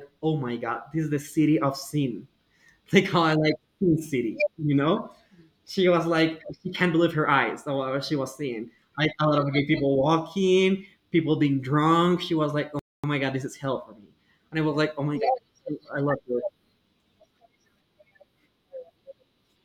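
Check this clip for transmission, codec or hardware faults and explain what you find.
There's one fault here, a playback stall in this speech clip. At 12.79 s the sound cuts out mid-flow and stays silent for about 0.24 s, coming back at 13.04 s just before "my god this is". The cause is likely the player running dry of data or its thread getting held up for that quarter-second, so nothing reached the output until it caught up and carried on.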